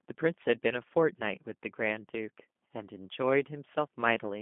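The speech has passed through a G.729-style codec for its whole length, with the sound pointing to roughly 8 kbit/s. The voice is rebuilt from a vocal tract model and sparse pulses, so it comes out noticeably rough and synthetic, squeezed between 200 Hz and 3.5 kHz.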